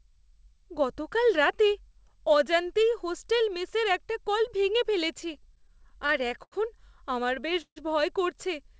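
From 5.34 to 6.54 s, just after "একটা কল ভেঙে ফেলেছি", the speech stutters with repeated stalls: packets arrived late, the jitter buffer kept emptying, and the receiver stretched the last sound across 12 short gaps of up to 83 ms, about 196 ms in all. Nothing is lost, but delivery drags. From 7.24 to 7.78 s it recurs more heavily: 5 gaps, one lasting 147 ms with the held sound fading, filling about a third of that span.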